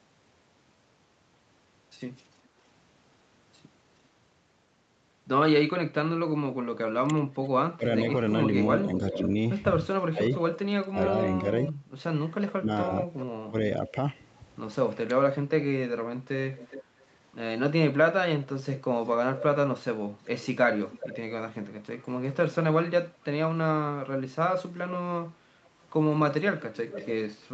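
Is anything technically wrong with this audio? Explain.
Yes, there are three kinds of echo-canceller trouble in this speech.

Echo leak occurs from 6.77 to 13.91 s, from 16.56 to 22.55 s and from 25.64 to 27.48 s. The likely cause is a far end playing the call on a loudspeaker whose echo canceller let part of the microphone pickup through and sent it back. The result is a delayed copy of the voice trailing by about 0.41, 0.43 and 0.44 s respectively. It sits about 10 dB below the direct speech in the first stretch and about 15 dB below in the later two.

Speech suppressed in double talk occurs from 7.03 to 10.97 s and from 12.58 to 15.1 s, overlapping the first echo stretch. With both sides talking at once, the canceller likely could not tell the local talker from the returning echo and turned everything down. The voice dips by as much as roughly 20 dB in short pieces, adding up to well under a second in the first stretch and a fraction of a second in the second.

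Background gated by the echo canceller occurs from 11.78 to 11.91 s. While the loudspeaker was active, the canceller clamped the microphone hard. The room sound drops by about 8 dB for a brief moment and comes straight back when the gate releases.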